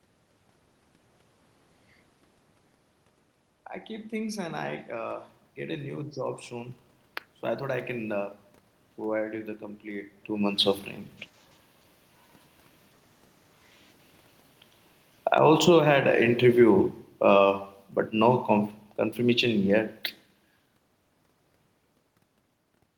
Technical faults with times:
3.88-6.82 automatic gain rising
15.17-20.11 automatic gain falling
15.85-16.48 automatic gain rising

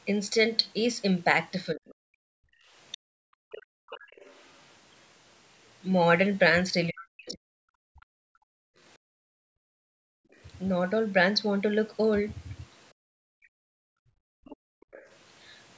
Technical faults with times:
1.74-2.41 speech suppressed in double talk
1.90-10.36 other side's voice leaking through
2.69-3.90 background gated by the echo canceller
6.90-8.51 speech suppressed in double talk
8.98-14.87 background gated by the echo canceller
13.43-15.09 other side's voice leaking through

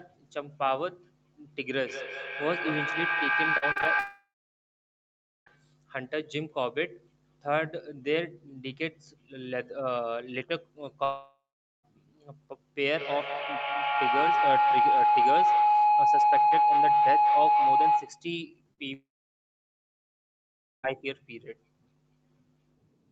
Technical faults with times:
1.85-5.72 feedback howl
3.57-3.87 repeated packet loss (robotic sound)
3.99-5.58 long network dropout
11.04-11.85 long network dropout
12.87-18.32 feedback howl
18.73-18.80 short concealed packet loss
18.94-20.85 long network dropout

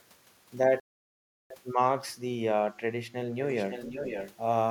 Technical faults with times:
0.80-1.50 Bluetooth stall
3.42-4.34 echo leak

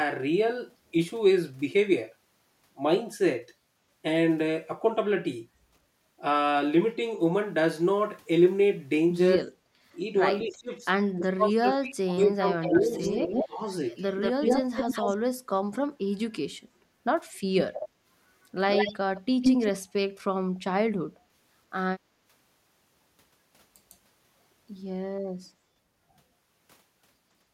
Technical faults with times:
9.58-9.81 background gated by the echo canceller
10.44-13.01 speech suppressed in double talk
12.61-13.45 echo leak
13.45-13.61 speech suppressed in double talk
13.96-15.17 echo leak
16.45-16.56 speech suppressed in double talk
17.61-17.88 echo leak
18.71-19.71 echo leak

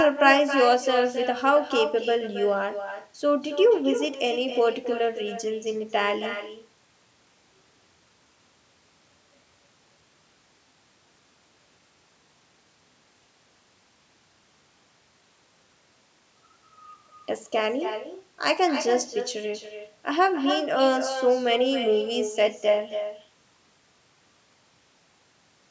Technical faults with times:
0.00-25.70 echo with no canceller

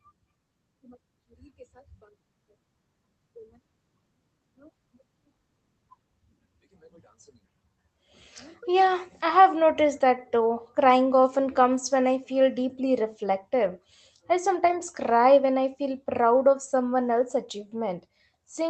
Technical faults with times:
5.97-5.99 skip ahead
6.07-7.98 jitter buffer speed-up
8.63-8.88 jitter buffer speed-up

